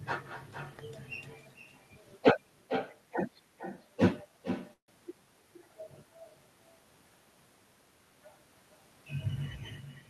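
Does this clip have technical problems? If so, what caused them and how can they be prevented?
Yes. There is an echo with no canceller throughout: every phrase returns about half a second later, about 10 dB quieter and thinner. The far end's loudspeaker feeds its microphone and nothing removes it. The clear, delayed repeat sets it apart from room reverberation, which smears sound without a distinct copy. Using echo cancellation or a headset at the far end prevents it.

A call audio freeze runs from 4.73 to 4.90 s. The last sound is stretched into a fading buzz, then about 110 ms of silence, before the speech resumes exactly where it stopped. Packets were likely delayed long enough to empty the jitter buffer. Unlike packet loss, nothing is skipped. The audio is only shifted later. A steadier network connection or a deeper adaptive jitter buffer prevents it.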